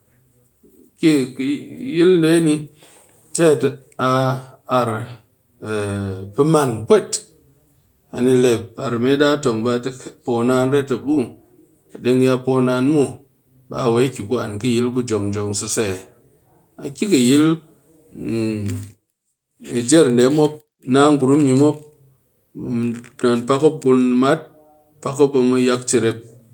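No audible technical faults anywhere in the speech recording; nothing to log.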